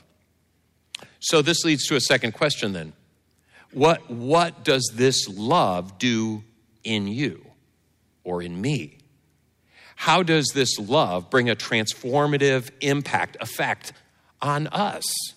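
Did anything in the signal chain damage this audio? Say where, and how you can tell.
Yes, there's hard clipping in the speech, most likely from a stage driven past its ceiling, such as the converter input or a fixed-point format conversion. You hear it as a harsh, crackly fuzz from 1.34 to 2.63 s, again briefly at 3.84 to 3.91 s, and from 4.33 to 5.08 s. The overdrive is about 6, 5 and 4 dB, so the peaks get sliced flat, and those square tops spray harmonics high up the spectrum.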